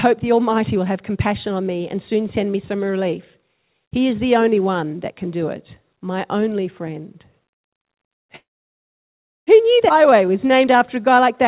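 At 8.36 s a call audio freeze begins, likely because packets were held up in transit and the jitter buffer ran empty. The receiver bridges the wait, then goes quiet for about 1.04 s of the 1.1 s gap until 9.50 s. When the audio resumes, it continues from where it stopped with nothing missing.

At 9.89 s comes a skip ahead: the network or an overflowing jitter buffer dropped roughly 0.7 s of speech while later audio was already queued. Playback jumps straight across with only a tiny splice lasting until 9.93 s, joining the two sides almost directly.

From 10.03 to 11.22 s a jitter buffer slow-down follows. The buffer rebuilds its reserve by repeating single pitch periods, adding 77 ms. The speech plays at 94% speed at unchanged pitch, sounding slightly drawn out. Throughout, nothing is heard above 4 kHz, consistent with a narrowband telephone codec on the call path.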